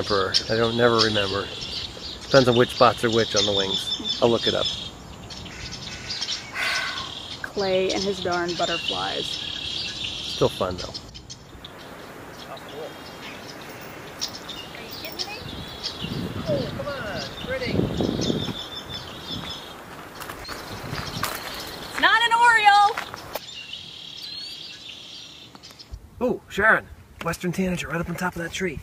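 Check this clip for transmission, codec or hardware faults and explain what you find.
Nothing here stands out as a transmission or hardware problem; the sound comes through steady and intact the whole way.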